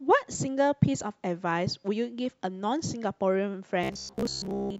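From 3.84 to 4.79 s the speech collapses into robotic sound from repeated short buffers: a stiff, metallic buzz at about 66.8 Hz that loosely tracks the speech. That's likely audio arriving too slowly, with roughly 15 ms chunks replayed over and over, standing in for most of the real signal.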